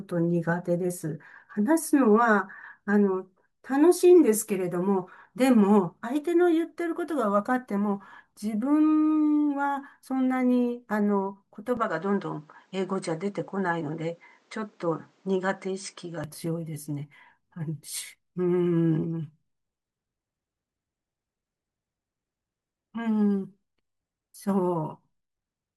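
From 11.77 s to 16.24 s the speech turns duller, with nothing above 8.7 kHz and a faint new background noise about 45 dB down. The level holds and there's no gap, yet both tone and noise floor change together, which points to an input likely switched to a poorer device rather than simple filtering.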